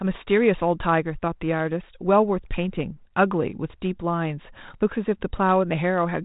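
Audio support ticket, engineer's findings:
No faults found in the speech; the G.726 ADPCM path sounds consistent with the 32 kbit/s DECT-style rate, with only light coding grain and nothing passing above about 3.8 kHz.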